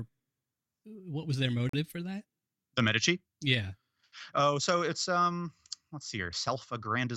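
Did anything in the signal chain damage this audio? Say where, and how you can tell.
Yes. The damage happens at playback, where streamed segments are stitched together. There is a gap between stream segments from 1.69 to 1.74 s in the speech. It is a hole of silence of about 40 ms with hard edges on both sides. Nothing is missing: the speech after the hole carries on intact, just later. That points to timestamps on two adjacent segments that do not quite meet. The player fills the space with silence, adding time rather than dropping audio.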